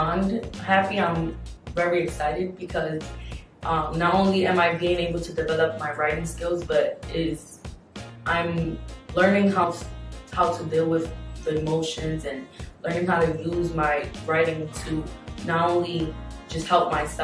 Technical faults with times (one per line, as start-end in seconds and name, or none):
none